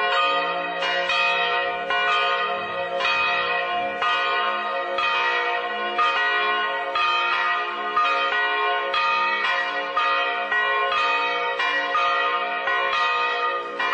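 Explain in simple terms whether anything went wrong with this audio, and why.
Nothing went wrong here; there are no technical faults at any point in this audio.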